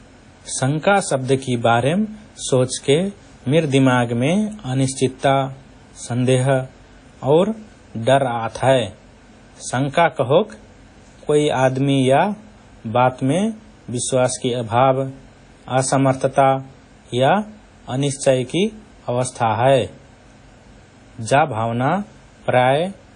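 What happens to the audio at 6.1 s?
At 6.1 s, as throughout the speech, likely WMA compression at a low bitrate, near 32 kbps, smears quantisation noise across long transform blocks, leaving ringing, washy hiss and nothing above 10 kHz.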